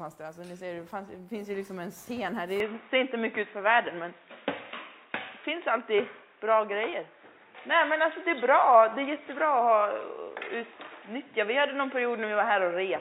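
From 2.6 s to the end the sound abruptly turns dull, losing everything above 3.8 kHz, with a level shift of roughly 5 dB, likely an input switched to a poorer device.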